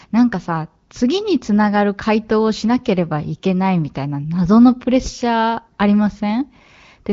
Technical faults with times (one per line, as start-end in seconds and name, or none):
none